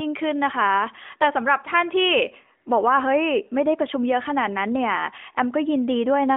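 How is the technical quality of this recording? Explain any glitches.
No glitches or technical faults can be heard here.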